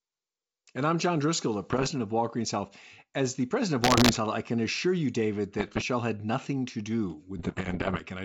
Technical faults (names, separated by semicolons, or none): bit errors on an ADPCM link